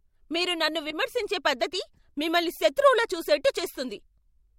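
A speech clip with two corrupt frames decoded, where damaged compressed data got played instead of concealed, so misread gains and codes threw energy into the wrong frequencies. The first, 0.90 to 0.96 s right after "మీరు నన్ను", is a glitch peaking around −20 dBFS across a couple of frames; the second, 1.94 to 1.99 s just before "మిమ్మల్ని శత్రువులా చూసేట్టు", is a much fainter glitch, around −50 dBFS, spread over several frames.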